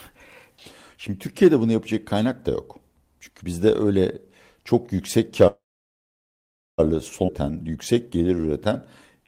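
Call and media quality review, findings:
Call audio freeze, 5.47–6.80 s, right after "bizde öyle çok yüksek". Brief continuation of the last sound, then about 1.2 s of silence. Likely jitter buffer underrun from late packets. Playback resumes where it stopped, nothing lost, about 1.3 s of delay added.

Skip ahead at 7.26 s. Abrupt forward jump, almost no gap. Roughly a second of audio missing, sides butted together. Audio dropped in transit or discarded by the jitter buffer on overflow while later audio was queued.

Jitter buffer slow-down, 7.43–8.70 s. Speech runs at 89% speed, same pitch, sounds drawn out. Receiver repeating pitch periods and pause fragments to rebuild reserve. Adds 155 ms.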